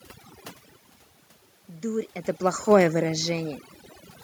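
Overdone noise removal runs through the whole speech clip: the suppressor cuts frequency bands near its noise estimate too hard, leaving twinkling specks in near silence and taking quiet parts of the voice with them. From 2.67 to 3.49 s, automatic gain falling sets in as the gain control eases its level down by about 3 dB, so voice and background sink together, separate from the talker's own shifts in distance near 0.5 and 2 s.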